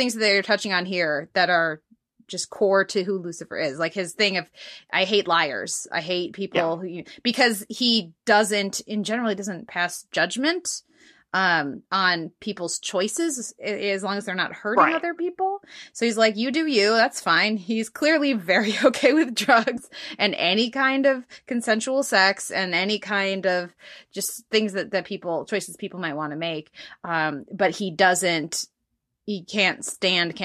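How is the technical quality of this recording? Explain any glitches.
The recording has three brief decoding glitches: two short skips in the compressed audio and one damaged frame near the end.

Compressed frames skipped at 15.19 s, right after "not hurting right other", and again from 19.74 to 19.80 s, between "okay with" and "and any kind of". Each time compressed frames never reached the output, so the speech jumps forward by roughly 20 ms.

A corrupt frame was decoded from 29.92 to 29.95 s. Flipped bits in what sounds like a single frame were decoded as if valid, so misread gains and codes put energy at the wrong frequencies for that frame's duration. The result is a short glitch peaking at about -20 dBFS.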